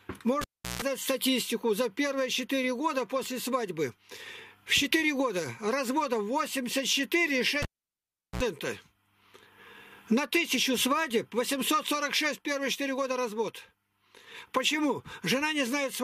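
At 0.41 s and again at 7.62 s a cable is pulled and plugged in: a pop, a gap of about 0.35 s then 0.75 s, 60 Hz mains buzz as the bare tip touches, and a second pop. That buzz separates it from a plain dropout.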